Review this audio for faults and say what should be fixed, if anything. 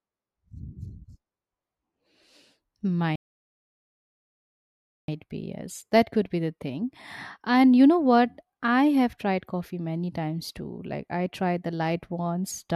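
Rebuffering stall, 3.16 to 5.08 s: the speech drops into silence for about 1.93 s, then picks up exactly where it broke off, with "be yes" following the gap. The player drained its downloaded audio and had to halt until more data arrived, so nothing is skipped, but the pause stretches the timeline. To prevent it, buffer more audio ahead of playback or adapt the stream's quality to the available bandwidth.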